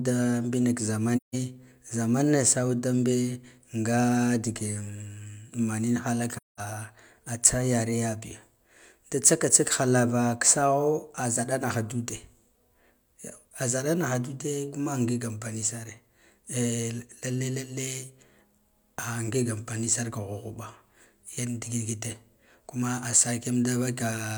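Speech with AAC frame loss with muting at 1.16–1.35 s and 6.35–6.60 s. Zeroed frames leave soft-faded silent holes, blank spectrogram columns and flattened waveform stretches.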